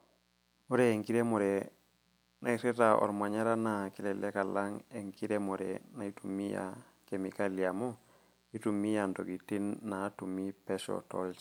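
From start to finish there's a mains buzz sitting under the speech, about 40 dB down. It's built on 60 Hz, with sharp switching spikes twice every cycle from a dimmer, rectifier or missing shield, so the harmonics run into several kHz and you get that steady, raspy edge.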